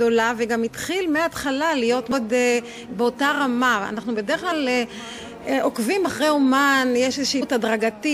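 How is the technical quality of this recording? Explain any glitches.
The recording is marred by three short glitches, all caused by damaged data in a compressed stream, at 2.12 s, from 4.51 to 4.53 s, and at 7.41 s. At each point part of the compressed data was wrong, so the decoder could not read those frames correctly, lost its place and had to hunt for the next valid frame header before playback resumed. What reaches the ear is a brief disturbance of roughly 20 ms, a sudden break in the sound.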